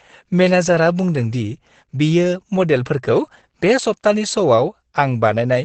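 From start to finish the speech sounds muffled and hoarse, with no air or sparkle. The likely cause is heavy Opus compression in its speech (SILK) mode, which fits a low bitrate around 12 kbps. At such rates the encoder narrows its band and models the voice coarsely. On a spectrogram the energy stops at a flat ceiling near 8.7 kHz, with empty space above it for the whole clip.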